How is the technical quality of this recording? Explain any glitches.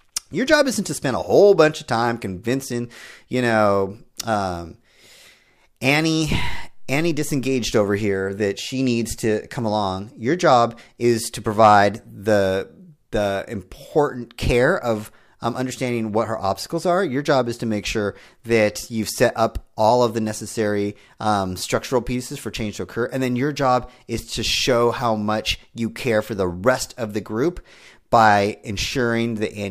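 No technical faults can be heard anywhere in the speech. There are no glitches to explain.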